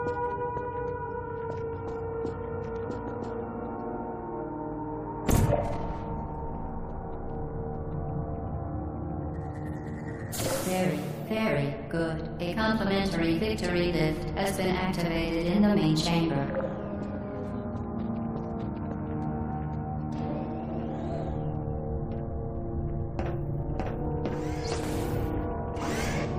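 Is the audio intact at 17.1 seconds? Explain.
Yes, the audio at 17.1 seconds is intact, with no dropout, click, distortion or other fault at that moment.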